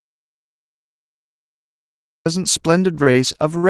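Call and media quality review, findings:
Audio dropout to silence, 0.00–2.26 s: clip opens already in the gap. Silence with no room tone, then speech cuts in abruptly. Probable component: capture device or link. Input likely lost or muted while the encoder kept writing empty frames. Anything spoken in this span is unrecoverable.

Repeated stalls (stutter), 2.71–3.66 s: speech drags and hitches six times. Probable component: receive-side jitter buffer, repeatedly starved by late or slow packet delivery. Each underrun was bridged by extending the preceding sound, 136 ms in total, longest single fill 53 ms, roughly 14% of the span. No content lost, only stretched timing.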